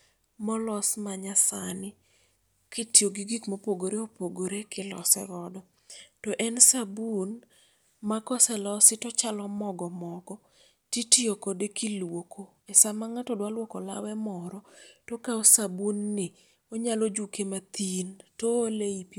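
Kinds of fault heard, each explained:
Clock drift buffer slips: two devices on separate clocks likely drift apart, so a few samples slip, giving a click every 2.5 s after "molos manyasani".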